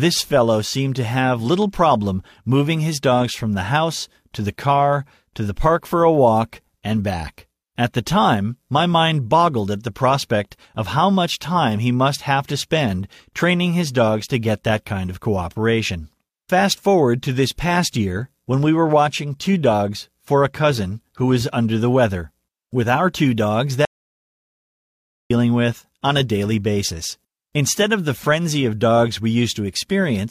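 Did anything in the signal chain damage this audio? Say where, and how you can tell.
Yes. Audio dropout to silence, 23.85 to 25.30 s: speech falls to silence with no room tone for 1.45 s, likely input-device link loss.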